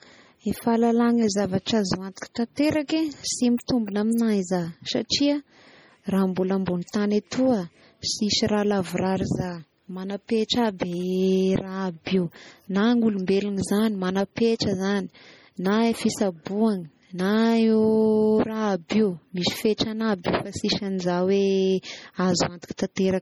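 Throughout the speech the sound is heavily damaged by what is likely MP3 compression, with content extending to about 21 kHz. The swirly, watery texture, where faint detail flickers in and out between frames, points to a very low bitrate near 32 kbps rather than to noise reduction, which dulls sound without that churning.

At 3.57 s and again at 3.68 s there is pre-echo. Quantisation noise spread across a whole transform block leaks into the quiet moment before a sharp onset, so a brief hiss of about 10 to 12 ms arrives just ahead of each attack. Unlike a click, it builds up before the attack and softens it.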